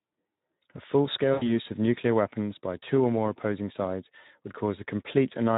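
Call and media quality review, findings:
Speex codec throughout: hoarse, noisy speech with clearly audible CELP damage, consistent with a low-bitrate setting around 11 kbps starving the excitation coding.

VoIP packet loss concealed by the speech codec, 1.33–1.53 s: fading extrapolated sound just before "of nuclear weapons by". The roughly 80 ms gap fits four lost 20 ms frames. The decoder repeats its last pitch and filter with decaying gain, and recovery lags after packets resume.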